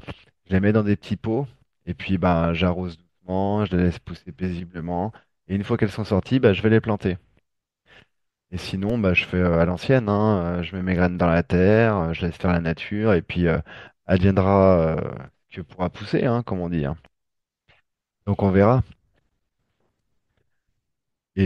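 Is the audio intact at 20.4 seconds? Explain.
Yes, at 20.4 seconds the speech plays through intact, with no dropout, click, distortion or other fault to be heard.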